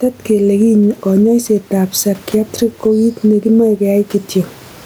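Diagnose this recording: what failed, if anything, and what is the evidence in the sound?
Gain pumping throughout: room noise swells in the gaps and ducks about 10 dB under loud speech, likely mic gain too hot into fast limiting.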